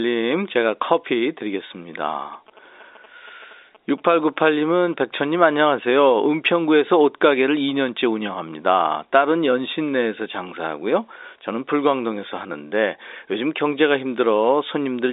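Telephone-band speech, limited to roughly 300 Hz to 3.7 kHz by its G.711 coding, carries GSM signalling bursts from 2.03 to 4.94 s. They sound like a galloping dit-dit-dit of short buzzes at 217 Hz, roughly 30 dB below the speech. A nearby 2G phone handshaking with its network sends these bursts, and the audio circuitry rectifies them. Steady mains hum would be a continuous 50 or 60 Hz tone, whereas this buzz is gated into clusters at 217 Hz.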